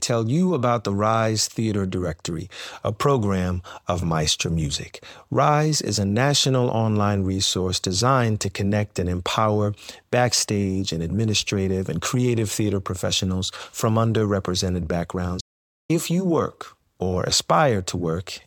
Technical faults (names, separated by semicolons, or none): audio dropout to silence